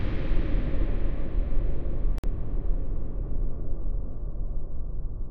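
A recording of sounds with a Bluetooth stall at 2.18 s: the audio drops to silence for 53 ms and resumes at 2.24 s. The likely cause is radio interference delaying packets until the headphones' buffer ran empty and playback waited for retransmitted data.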